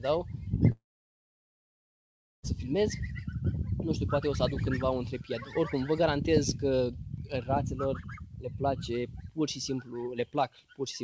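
From 0.72 to 2.45 s the audio collapses into a brief fading buzz or hiss and then near-silence, likely a long network dropout: about 1.7 s of sound never arrived, so the receiver stretched the last sound out before going quiet. The waveform shows a short decaying tail and then a flat line, and the spectrogram shows a blank gap. Through the call path, G.722 leaves the spectrogram empty above 8 kHz.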